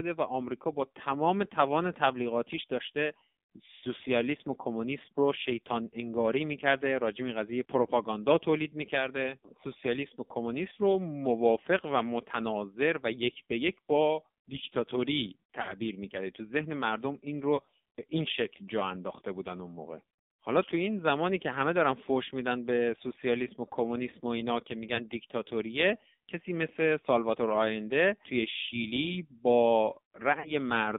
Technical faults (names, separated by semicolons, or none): AMR narrowband mobile codec; lost AMR speech frames